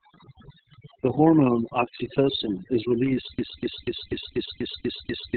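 A short speech recording with three overlapping problems. Overdone noise removal has pushed the background down and broken it into twinkling specks; a spectrogram shows isolated flickering bins and holes. Opus voice compression in its narrowband SILK mode makes the speech muffled, hoarse and slightly robotic, with nothing above 4.4 kHz, which fits a very low bitrate around 6 kbps; the spectrogram shows a hard ceiling. From 3.39 s to the end, a broken-record loop repeats the same 0.24 s fragment eight times back to back. The cause is likely a stalled player or stream. The waveform shows one identical block repeating.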